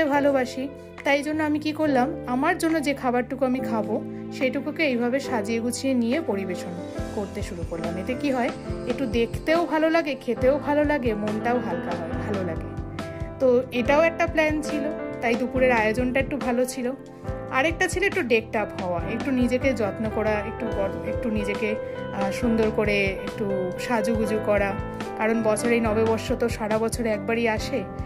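No technical faults can be heard anywhere in the recording.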